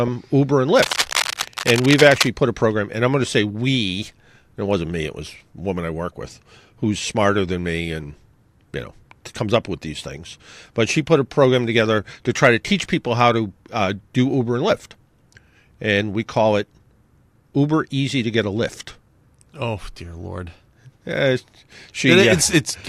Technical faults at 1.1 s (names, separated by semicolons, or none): cable scratch noise